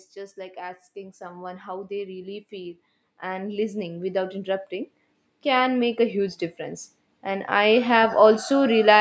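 From 0.14 s to 8.46 s, automatic gain rising: the gain control judged the speech too quiet and lifted its gain by about 16 dB, so voice and background swell together.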